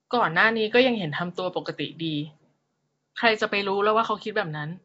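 From start to finish the speech carries a rough, hissy halo and a smeared, underwater quality, likely from Nellymoser compression, which fits a 32 kbps stream. The spectrogram shows nothing above 7.7 kHz, with noisy, blocky filling where weak bands received no bits.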